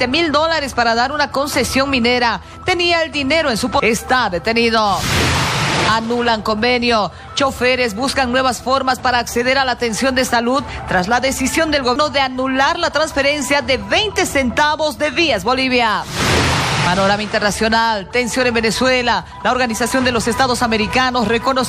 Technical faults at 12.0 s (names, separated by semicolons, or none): CD skip